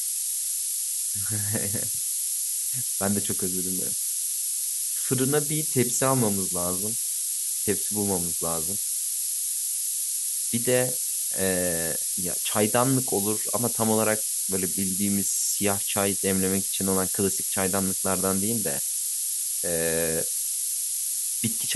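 Low bit depth with noise shaping runs through the whole speech clip. With only 3 bits, the coarse rounding error is fed back and pushed upward in frequency, producing a steady thin hiss that climbs sharply toward the top of the band, roughly 10 dB from the speech level.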